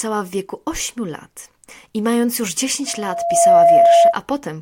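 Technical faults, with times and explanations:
2.86–4.16 s, loudspeaker feedback squeal: after "lat I mając już", a 681 Hz tone swells over roughly 0.7 s to about 15 dB above the speech, a self-sustaining loop rather than a steady hum.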